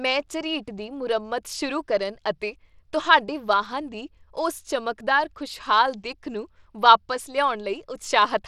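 From start to finish the speech has a grainy, brittle edge, and the top end keeps dropping out and flickering back, which sounds like Bluetooth SBC compression is likely at work. The codec splits the audio into a handful of wide bands and starves the weaker upper ones of bits, so treble thins out while coarse quantisation leaves grit and an aliased sheen on everything. The damage is plainly audible and fits a starved link of around 96 kbps.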